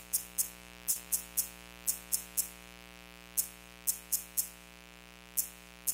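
A mains buzz runs through the whole clip, built on 60 Hz. Sharp switching spikes, twice per mains cycle, get into the signal path from something like a dimmer, a rectifier or an unshielded run, and their harmonics stack up well into the kilohertz range. It is heard as a steady, raspy buzz sitting roughly 20 dB under the sound. On a spectrogram it appears as evenly spaced horizontal lines at multiples of 60 Hz, unbroken from start to end.

Between 0.91 and 1.07 s there is a short concealed packet loss. About 40 ms of audio never reached the decoder in time. The receiver covered the gap with 36 ms of synthesised continuation, extending the preceding sound, and about 5 ms was dropped outright. It then cross-faded back into the real signal. The result is a brief smear or wobble. On a spectrogram it shows as a patch where the preceding pattern simply carries on, smooth and slightly blurred, with a soft seam where real detail resumes.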